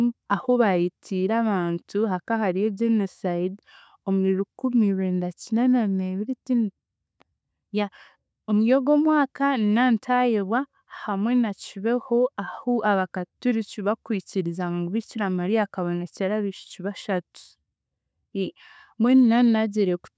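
Nothing's wrong with this speech recording; it has simply gone through a call's microphone processing, so the lowest bass is trimmed away and there's no content above 8 kHz, both normal for that path.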